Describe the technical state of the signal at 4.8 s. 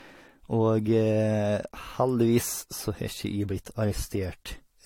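At 4.8 s the speech carries generation loss, present across the whole clip. The likely cause is repeated lossy coding, with the sound pointing to about three successive AAC-LC passes at modest bitrates, each re-quantising on a shifted frame grid so the errors stack. Nothing remains above 16.6 kHz, and the result is a swirly, hollow, smeared texture, with consonant attacks softened more than any single encode would leave them.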